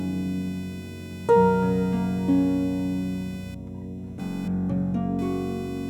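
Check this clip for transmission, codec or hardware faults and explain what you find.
One hardware fault runs through the whole clip: computer activity noise. Load swings in the processor, graphics card or mouse disturb the ground the audio circuit shares, adding a buzzing, chirping pulse train near 500 Hz, roughly 25 dB below the sound, that tracks the computer's activity rather than the audio.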